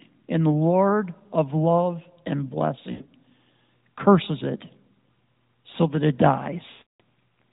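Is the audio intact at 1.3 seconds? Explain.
Yes, at 1.3 seconds the speech is intact, with no dropout, click or other fault.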